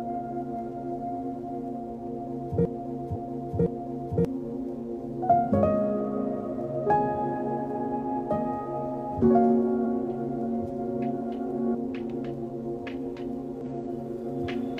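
From 2.65 to 4.25 s, a broken-record loop repeats a 0.58 s fragment exactly, four times. The player or stream likely stalled, and the real audio there is lost. Damaged data in the compressed stream causes short blips at 3.12 to 3.17 s, 9.8 s and 13.61 to 13.66 s. Each time, the decoder loses sync.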